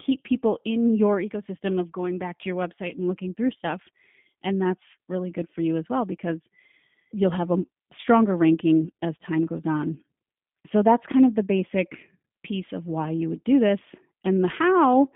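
Throughout the clip the speech has a slightly rough, synthetic edge, and the band is squeezed to roughly 150 Hz to 3.5 kHz, with no brightness or sibilant air above it and thin lows. This is the G.729 codec at work, with damage plainly audible. The sound character points to the G.729A variant at about 8 kbit/s. It rebuilds each short frame from a vocal tract filter, a pitch estimate and a few coded pulses, so fine detail is approximated rather than kept.

From about 8.01 to 8.06 s, between "you'll have a" and "ranking as time goes", the voice briefly smears into a stretched sound that sags in level before the speech recovers. This is VoIP packet loss concealed by the speech codec. Roughly 30 ms of audio went missing, which fits a single lost packet. The decoder filled the gap by repeating its last pitch and filter settings with falling gain, and because each frame depends on the previous one, the sound stays weak or distorted just after the gap.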